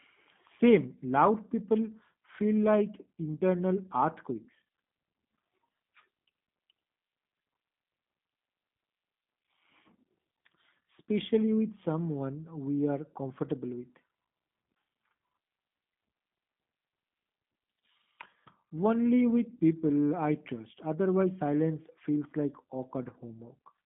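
From start to finish the speech sounds boxed-in, with a rough, synthetic edge on every phrase and no air or sibilant sparkle above about 3.8 kHz; the band sits roughly between 150 Hz and 3.7 kHz. That is the G.729 codec, here in its G.729A form, which fits an 8 kbit/s VoIP link. It discards the waveform and rebuilds each 10 ms frame from a vocal-tract filter, a pitch predictor and a few pulses, leaving plainly audible damage.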